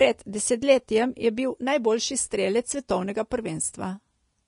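Across the whole recording the speech carries a grainy, hissy treble texture, and nothing reaches above 10.6 kHz. The cause is likely Vorbis compression at a low setting, which fits a bitrate around 35 kbps: the coder keeps a smooth spectral outline but renders the upper detail as coarse, noise-like filler. A plain low-pass filter would leave a clean, dull top. Here the remaining highs sound rough, and consonant onsets are smeared.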